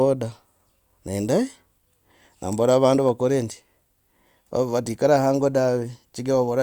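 A speech recording with a single sharp snap at 2.53 s, just before "vandu vakore ndi". It is an electrical switching spike: a brief, hard-edged transient that sits on top of the speech, not within it, and peaks at roughly -20 dBFS. It is very short and isolated, and it bears no relation to the speech envelope. This points to a nearby switch, relay or static discharge as the likely cause, with the arc radiated or coupled into the audio line.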